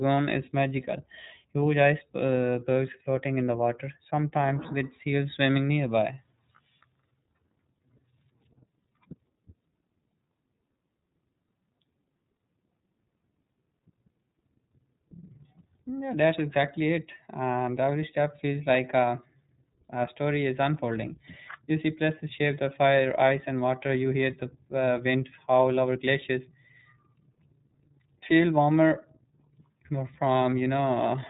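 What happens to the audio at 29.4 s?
At 29.4 s, as throughout, the speech sounds thin, slightly rough and synthetic with nothing above 3.8 kHz: iLBC codec damage, coding each frame independently, which fits its 30 ms, 13.33 kbps mode.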